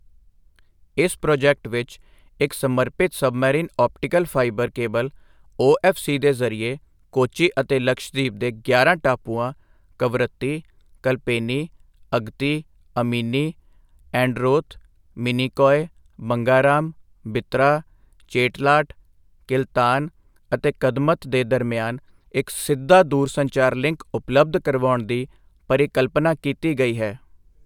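No technical faults are audible anywhere in the speech recording.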